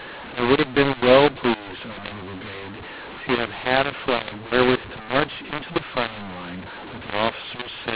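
Mu-law and A-law mixed up throughout: mu-law telephone speech decoded as A-law scrambles sample levels, making speech harsh and distorted and filling pauses with lifted noise.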